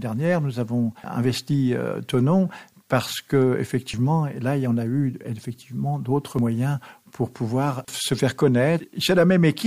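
At 3.94 s and again at 6.39 s the sound jumps forward, losing something like a twentieth of a second each time, with the two sides butted straight together and no gap of silence. That's audio missing between chunks, and the likely cause is a recorder or processor working in blocks of about 2.5 s and dropping a sliver every time it closes one block and opens the next, which is why the two skips land so regularly.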